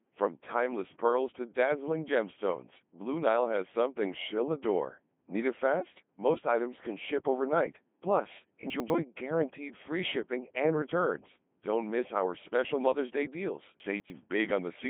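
Speech passed through a Codec 2 vocoder for its whole length, with heavy codec damage that fits the 2.4 kbit/s mode. The decoder rebuilds the speech from pitch, voicing, energy and a coarse spectral envelope, synthesising it from sine waves rather than keeping the original waveform, so it sounds robotic and buzzy. The band sits roughly between 150 Hz and 3.5 kHz, with nothing above 3.7 kHz. The clip also has chunks out of order in two places. From 8.7 to 8.9 s, just before "guaranteed free shipping and", a 100 ms chunk plays one chunk later than it should, so that moment sounds jumbled, with hard joins. From 13.8 to 14.1 s a 100 ms chunk arrives two chunks late, giving a longer scrambled stretch with the same abrupt seams. Nothing is missing in either case; the audio is simply played in the wrong order.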